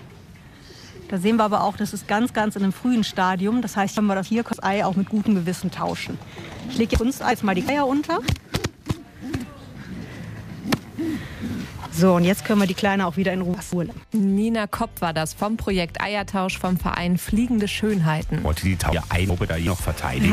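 Frames out of order turn up four times: 3.97–4.53 s, 6.95–7.69 s, 13.54–13.91 s and 18.93–19.67 s. Each time two adjacent blocks of about 280, 370, 190 and 370 ms got swapped, so the stretch flutters garbled, though nothing's actually lost.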